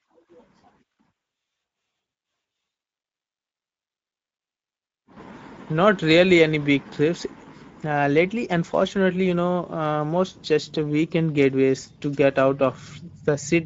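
Speex codec damage is plainly audible throughout the speech. The starved CELP excitation leaves it noisy and hoarse, which points to a mid-range bitrate of about 17 kbps.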